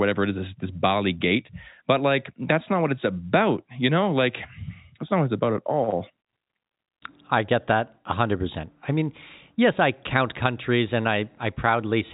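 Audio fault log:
No faults found in this speech clip; the G.711 telephone coding path is working as expected, with audio band-limited below 4 kHz as a mu-law line would leave it.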